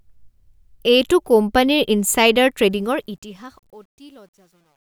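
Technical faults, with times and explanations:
2.71–4.82 s, truncation distortion on the fade-out. The speech turns gritty, worst from 3.58 s. Undithered coarse steps, which fit 10-bit depth, square off the quiet waveform.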